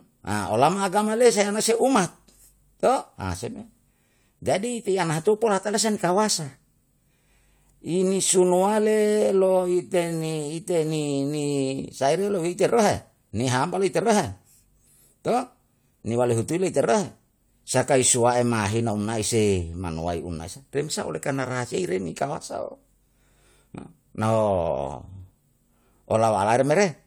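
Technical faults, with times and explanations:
No technical faults detected in this speech recording.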